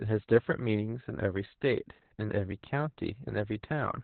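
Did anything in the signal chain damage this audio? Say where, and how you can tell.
Yes. The codec stage did the main damage. This speech has been through Opus voice compression in its SILK mode, narrowband, with nothing above 4.4 kHz. On a spectrogram the energy stops at a hard ceiling near 4 kHz, and fine harmonic detail below it looks smeared and blocky in 20 ms frames. The heavy coding of the excitation makes the voice sound muffled, hoarse and slightly robotic, which fits a very low setting around 8 kbps.

The second fault is in the driver or buffer stage, an underrun with held sample at 2.51 s that lasts about 2.67 ms, a gap of 128 samples. The output buffer emptied, and the converter held its last value. On the waveform this shows as a short flat line. Playback resumes where it stopped with essentially no audio lost, so the join causes only a faint tick and a brief stall rather than a sharp click.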